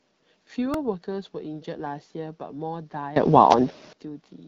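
A repeated buffer at 0.74 s: fresh audio failed to arrive in time, so the playback device replayed its last block, about 1.45 ms long (which fits a 64-sample buffer), three extra times. Four hard-joined copies that short come across as a tiny click or buzz in the speech rather than a stutter, and no audio seems to be lost.

A sudden gain jump from 3.16 to 3.93 s: the speech and the background noise leap up together by about 21 dB, then drop back at 3.93 s. This is likely a digital gain setting applied abruptly, without any ramp, with the AMR wideband (HD Voice) codec's light coding texture rising along with everything else.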